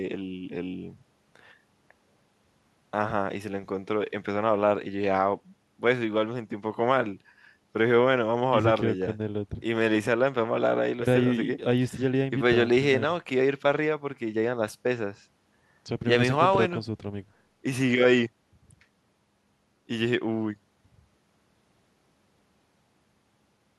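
Listening to this speech recording, nothing technical stood out.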